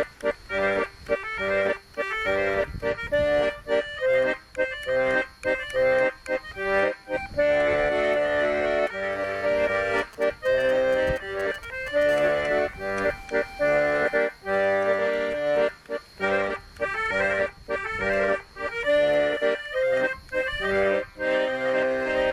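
From 9.98 to 12.03 s, GSM signalling bursts from a nearby 2G phone galloping ticks and 217 Hz buzzes, around 20 dB down, appear as clustered vertical stripes. From 12.09 to 15.27 s, steady GSM phone buzz, about 34 dB below the signal, shows as evenly spaced 217 Hz harmonic lines.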